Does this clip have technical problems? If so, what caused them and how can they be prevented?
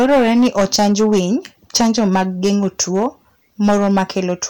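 Yes, there's hard clipping across the whole speech clip. The level was pushed roughly 11 dB past what the chain could pass, so the peaks get sliced flat, and a fair few percent of samples hit the ceiling, giving a harsh fuzz on loud syllables. Keep input gain lower and leave headroom before the converter.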